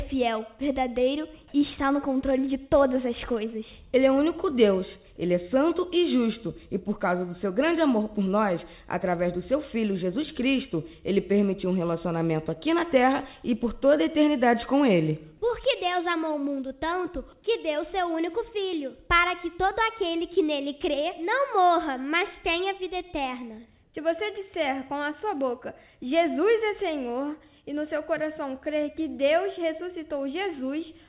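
At 23.84 s there's a short stretch, about a tenth of a second to 23.94 s, where the background loses its texture and turns into a flat, even hiss, sitting roughly 1 dB off the level around it. That's comfort noise in place of the background, likely from the sender going quiet during a pause and the receiver filling the gap with generated noise. The background sits about 40 dB under the loud parts. The whole clip is band-limited to 4 kHz, which fits a G.711 call path.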